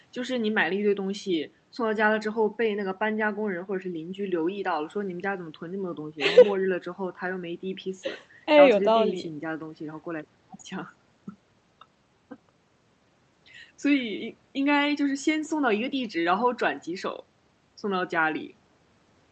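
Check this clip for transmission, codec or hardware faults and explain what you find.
No transmission, codec or hardware faults found; the speech carries the ordinary character of an Opus call path, with the audio band ending near 8 kHz as such a path would set it.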